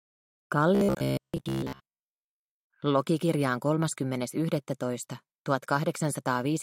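From 0.75 to 2.70 s the sound turns into a stiff, metallic buzz that still loosely tracks its shape. That's robotic sound from repeated short buffers: new audio was likely arriving too seldom, so the playback kept repeating the last small chunk while real audio got skipped, and most of that stretch ends up being repeats. The buzz sits at about 66.8 Hz, which fits a chunk roughly 15 ms long looping over and over.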